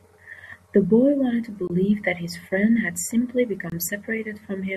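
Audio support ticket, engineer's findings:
Overlap between stream segments at 1.44 s: a quick click or tiny skip where the waveform jumps. About 5 ms of real speech got trimmed because two segment timestamps overlapped and the player dropped the overlap as if it were doubled. The segments look like 2 s long. Suspect the segmenter or packager's timestamp math. Worth checking segment boundaries for off-by-a-frame drift.

Gap between chunks at 1.68–1.70 s and again at 3.70–3.72 s: short hard-edged holes, each about 23 ms, landing about 2 s apart, so one per 2 s chunk join. Nothing's missing, the speech just stops dead at each seam. A 23 ms hole fits a 1024-sample block at 44.1 kHz, so likely codec priming or padding not being stripped, or the player starting each chunk a block late. Check gapless handling at chunk boundaries.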